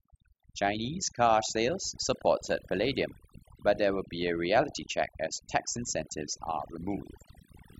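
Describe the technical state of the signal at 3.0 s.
At 3.0 s, overdone noise removal is active, as it is throughout the clip. Frequency bands near the noise estimate are cut away. The background drops and breaks up into twinkling specks. Quiet parts of the voice are cut away with it.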